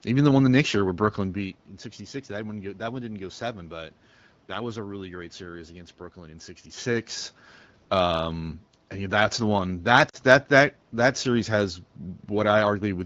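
At 10.09 to 10.16 s, lost AMR speech frames cause a brief dip. About 40 ms went missing, which fits two frames that the decoder patched from earlier sound.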